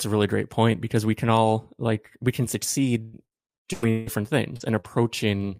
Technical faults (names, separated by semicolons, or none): repeated packet loss (robotic sound); short concealed packet loss; lost packet rebuilt from error correction